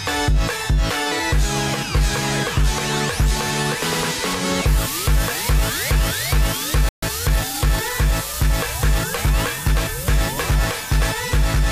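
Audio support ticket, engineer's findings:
Playback stall, 6.89 to 7.03 s: output drops to silence for about 136 ms, mid-flow, then resumes. Likely player buffer underrun or blocked audio thread. Waveform: flat silent gap with abrupt edges. Spectrogram: clean vertical blank band across all frequencies, hard-cut boundaries.

Time-compressed catch-up, 7.03 to 7.93 s: audio hurried at about 1.15x, pitch unchanged. Player trimming backlog after the stall by excising short segments and cross-fading joins. Spectrogram: harmonics stay at the same heights while events are squeezed closer together in time, with small smeared seams at the splices. Waveform: compressed envelope spacing.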